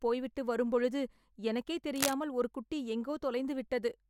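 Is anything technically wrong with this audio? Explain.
Yes. From 1.94 to 2.14 s, right after "போய்விட்டு வரும்பொழுது எனக்கே" and before "ஒரு குட்டி", a harsh scratching rustle about as loud as the speech sits over it. This is cable scratch noise, likely from a worn cable or connector shifting, its contact resistance jumping erratically.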